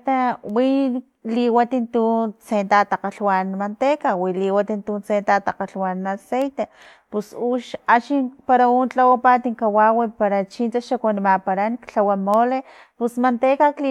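From 4.12 s to the end, a crude rate conversion resamples the speech by simple linear interpolation with no anti-alias filtering, consistent with a 48 kHz to 44.1 kHz change. The uncorrected errors form faint inharmonic fizz, roughly 55 dB down, tracking louder and brighter sounds.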